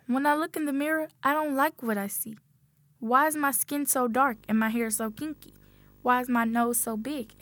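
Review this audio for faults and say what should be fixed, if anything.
From 4.11 s to the end, a screen or video cable leaks into the audio as video or display buzz. There's a 50 Hz field-rate buzz with hash on top and a faint 15.6 kHz line whine, all sitting around 30 dB below the sound. Next time, keep audio leads well clear of monitors and video cables, and don't let them share a ground.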